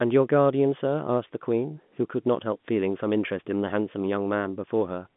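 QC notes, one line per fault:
No faults found.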